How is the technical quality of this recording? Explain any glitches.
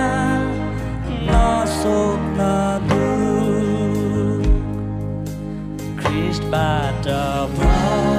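Nothing stood out on listening; I heard no glitches anywhere in the recording.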